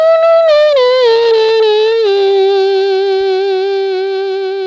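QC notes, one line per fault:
No faults found; the sound arrives over a WebRTC call path with nothing above 8 kHz, which fits wideband G.722 at 64 kbps.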